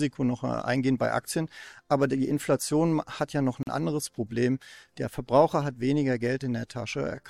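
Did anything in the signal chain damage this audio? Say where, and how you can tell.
Yes. There is a gap at a join of encoded pieces, introduced at the codec stage. Right after "hat ja noch", the speech drops to silence from 3.63 to 3.67 s, about 41 ms, with edges smeared by the codec, and then resumes exactly where it stopped. This happens when separately encoded segments are concatenated without trimming, so the encoder's start-up delay and the final frame's padding end up as dead air at the seam.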